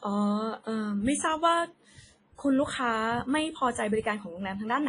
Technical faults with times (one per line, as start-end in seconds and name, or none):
0.00-4.88 WMA compression